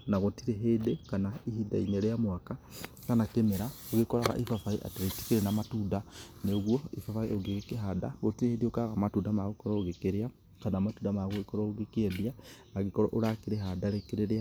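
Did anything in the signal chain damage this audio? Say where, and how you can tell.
No, nothing in this speech recording stood out on listening as damage from any stage of the signal chain.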